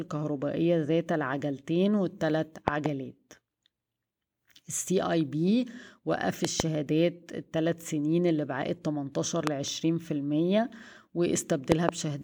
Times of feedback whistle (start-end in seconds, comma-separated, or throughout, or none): none